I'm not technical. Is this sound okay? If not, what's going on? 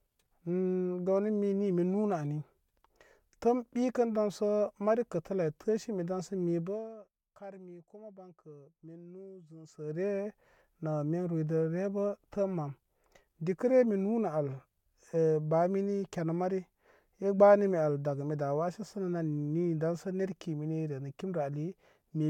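Yes, no faults here.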